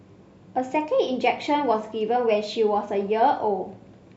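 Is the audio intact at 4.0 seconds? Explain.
Yes, at 4.0 seconds the speech plays through intact, with no dropout, click or other fault at that moment.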